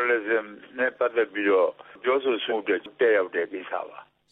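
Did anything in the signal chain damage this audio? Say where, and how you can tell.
Yes. A short, harsh blip cuts through the sound from about 2.47 to 2.53 s, lasting roughly 60 ms. That is damaged data in a compressed stream, at the codec or storage stage. A stretch of the encoded bitstream was corrupted, so the decoder misread the frames there, produced a garbled burst instead of the intended sound, and then regained sync at the next intact frame header.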